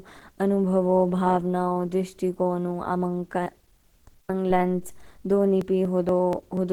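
A speech recording carrying three faults. Low bit depth with dither runs throughout: a steady, even hiss sits about 45 dB below the speech, consistent with roughly 10-bit resolution, and shows on a spectrogram as a flat noise floor across all frequencies. The speech also sounds hoarse, grainy and muffled, most likely from Opus compression at a low bitrate near 16 kbps in its hybrid speech mode. On a spectrogram, the upper bands look noise-filled and smeared rather than finely detailed, with content reaching about 20.1 kHz. From 4.90 s to 6.57 s, periodic USB or driver dropouts produce regular ticks every 0.24 s, about seven in all. Each skips roughly 10 ms of audio, visible as abrupt splices in the waveform and thin vertical lines on the spectrogram.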